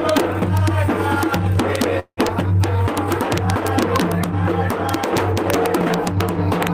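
Throughout the clip, the loudest peaks occasionally snap into harsh, violent cracks, far sharper than ordinary clipping would sound. This is integer overflow: the level sits right at full scale, with essentially no overdrive, so only a tiny fraction of samples, well under a tenth of a percent, go past the largest integer value. Instead of being held at the limit, each of those samples wraps to the opposite sign and jumps across the full range, which produces the crack.

From 1.99 to 2.20 s, the sound stalls and is carried on as a fading buzz that drops to silence for about 70 ms before playback resumes exactly where it stopped. This is a call audio freeze, most likely caused by packets held up in transit until the jitter buffer ran dry. About 178 ms of filler was inserted and nothing was lost, but everything afterwards now arrives 178 ms later.

At 2.29 to 2.33 s, playback abruptly jumps forward with almost no gap, bridged by only a few milliseconds of fill. 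About 70 ms of audio is missing, and the two sides are spliced nearly directly together. This skip ahead is a stretch dropped in transit or by the jitter buffer while newer audio was already queued behind it, which pulls the delay back by roughly 50 ms after the earlier freeze.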